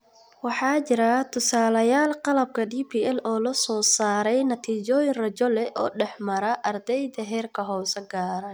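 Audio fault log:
1.37 s and 4.65 s, dropped samples: two single sharp clicks, each a thin vertical line across the spectrum. The likely cause is a handful of missing samples, a tenth of a millisecond or so, making the waveform jump straight to a later value. That's far too short to lose any speech.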